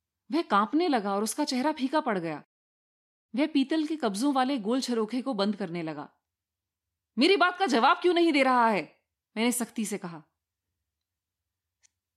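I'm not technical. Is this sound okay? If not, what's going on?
Yes, nothing in this recording stood out as a problem when I listened to it.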